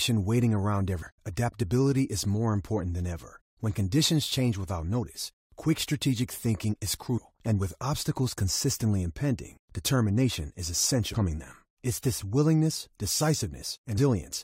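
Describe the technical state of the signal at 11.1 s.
At 11.13 s there is damaged data in the compressed stream: the decoder misreads corrupted frames, loses sync and resynchronises at the next frame header, producing a brief chirp, squawk, click or short hole.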